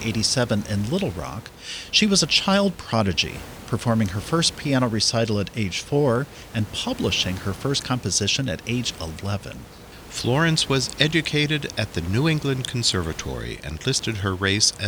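Nothing in this speech clip points to a technical fault, and the faint room noise sitting about 18 dB under the speech is just part of the space the microphone was in.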